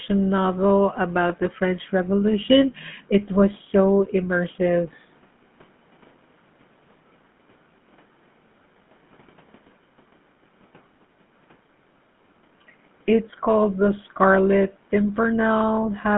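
From start to finish the speech carries the GSM full-rate codec's buzzy, gravelly roughness. Coarse pulse-driven excitation replaces the natural voice source, which fits a 13 kbps stream, in a band of roughly 150 Hz to 3.5 kHz. A plain telephone band-limit would sound muffled but smooth, not grainy like this.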